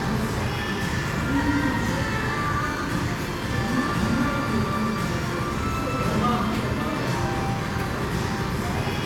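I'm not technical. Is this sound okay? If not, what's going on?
Yes, nothing wrong is audible.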